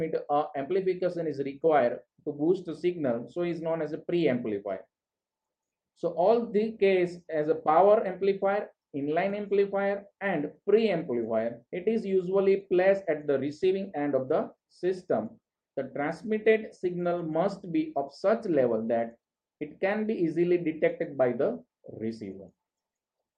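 Small, uneven hiccups run through the whole clip, as though the sound keeps skipping ahead by a hair, with no steady rhythm to where they land. This is clock drift between sender and receiver: the sending side's audio clock runs roughly 4 percent fast, so audio arrives a little quicker than the receiving side plays it out. The jitter buffer steadily fills, and the receiver has to keep shedding material to stop it overflowing.

From 0.01 s to 23.14 s the pacing feels slightly rushed and unsteady, with brief clipped moments where a sliver of sound seems to go missing. These are repeated timing corrections: the receiver trims short pieces out of the stream, always in the same direction, to keep up with audio effectively arriving at 104 percent speed. Each cut is tiny, but because they are spaced irregularly, the tempo never quite settles.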